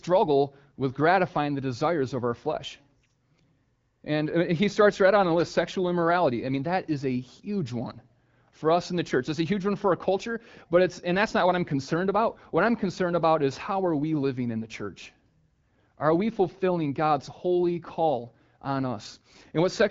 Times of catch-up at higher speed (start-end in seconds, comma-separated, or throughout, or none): none